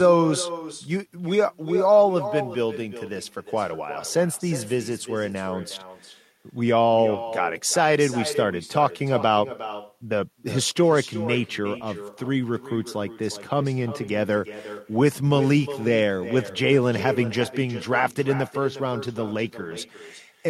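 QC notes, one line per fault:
throughout: echo with no canceller. A far-end loudspeaker leaks into its microphone, so the speech returns as a discrete copy around 400 ms late, about 12 dB down, not a smooth reverb tail.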